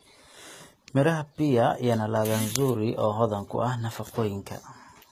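HE-AAC compression, likely, runs throughout the speech. The lower spectrum is coded directly while the treble is rebuilt from copied lower bands, so sibilants sound gritty and lispy, with nothing above about 14.9 kHz, which fits a bitrate near 20 kbps.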